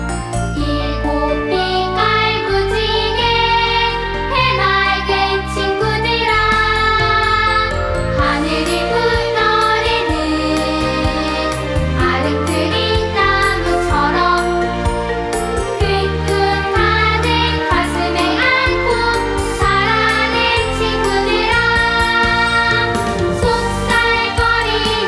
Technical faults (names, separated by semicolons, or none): none